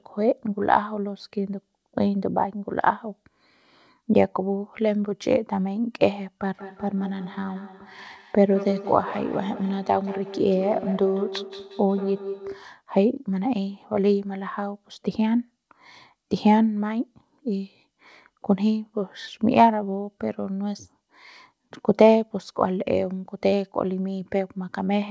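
Speech recorded over a call, and from 6.58 s to 12.7 s each word comes back again roughly every fifth of a second, a thinner, ringing copy that peaks about 11 dB below the speech itself. That is feedback echo between two devices: two endpoints in the same room on one call, with one playing out what the other's microphone sent, so that microphone captures it again. Each device's echo canceller only removes its own playback, so the loop survives. The call's band stops at 8 kHz, which fits a G.722 link.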